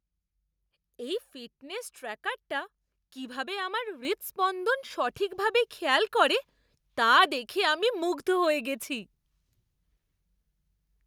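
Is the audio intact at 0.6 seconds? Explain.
Yes, the audio at 0.6 seconds is intact, with no dropout, click, distortion or other fault at that moment.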